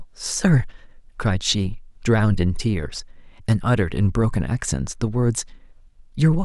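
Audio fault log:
0.29–6.19 s, clock slip clicks: faint ticks roughly every half second, about ten in all, each one sample dropped or repeated, likely from two unsynchronised clocks drifting apart by around 40 ppm. The spectrogram shows thin vertical broadband lines, and the waveform shows tiny step discontinuities.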